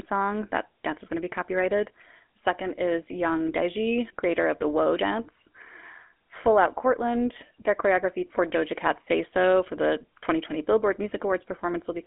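The GSM full-rate codec shapes the whole recording. It rebuilds speech from a vocal-tract model driven by sparse pulses, which fits its 13 kbps rate. The result is a plainly audible buzzy, gravelly roughness. The band runs from 250 Hz to 3.5 kHz, with nothing above 3.7 kHz.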